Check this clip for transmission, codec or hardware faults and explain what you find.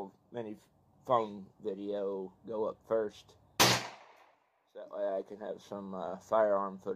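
No transmission, codec or hardware faults turn up in this clip.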